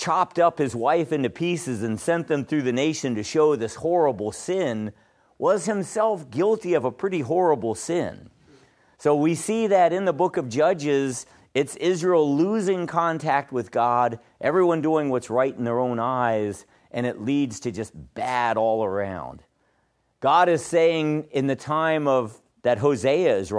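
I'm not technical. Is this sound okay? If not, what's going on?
Yes, nothing in this recording points to a technical problem; the signal holds steady the whole way with no breaks, jumps or damage you'd need to worry about.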